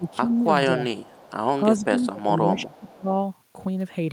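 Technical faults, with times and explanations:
0.00–0.33 s, 0.69–0.80 s and 1.78–3.09 s, speech suppressed in double talk: the speech level dips, by roughly 10 dB, then a shallow 5 dB, then as much as 20 dB across about 0.7 s of the last stretch, so the sound thins and fades in patches. The likely cause is an echo canceller failing to separate its own talker from loudspeaker echo while both sides were active. On a waveform the envelope caves in abruptly. A spectrogram shows the energy, especially the upper bands, thinning in blocks.
0.08–0.41 s, 0.96–1.31 s, 1.78–2.06 s and 2.67–2.91 s, echo leak: a faint delayed copy of the speech trails it by 444 ms, sitting about 25 to 30 dB below the direct sound, in short scraps. This is likely residual loudspeaker pickup that the far end's echo canceller didn't fully remove and sent back. A spectrogram shows weak ghost harmonics repeating the speech pattern 444 ms later. 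On the waveform these appear as low-level ripples.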